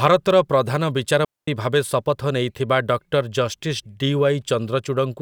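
At 0.30 s there is an abrupt jump in the speech, most likely a dropped buffer (overrun). The samples were overwritten before the program collected them, so roughly 15 ms of audio is gone and the two sides are spliced directly together with no silence.

From 1.25 to 1.48 s a digital wireless dropout mutes the sound for 229 ms. The link lost too much data and the receiver muted through a very short fade. The waveform shows a flat, near-silent hole and the spectrogram a clean dark band, with no noise burst on either side.

At 2.04 s a second, smaller skip of only a few milliseconds produces the same kind of jump. On the waveform each skip appears as a sudden step with no gap, and on a spectrogram as a thin vertical line of broadband energy.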